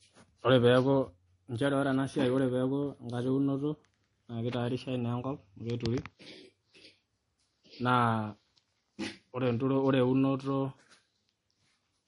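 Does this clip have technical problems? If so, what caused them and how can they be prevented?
Yes. Throughout the speech, nothing is present above 10.6 kHz and layered smearing artefacts are heard, likely from transcoding between lossy codecs, consistent with a low-rate MP3 re-encoded to Vorbis. Prevent this by encoding once from the lossless original.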